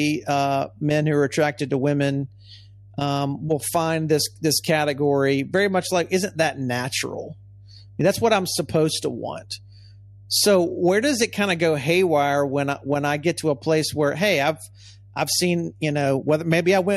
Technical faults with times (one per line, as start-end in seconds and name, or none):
0.00-16.96 mains hum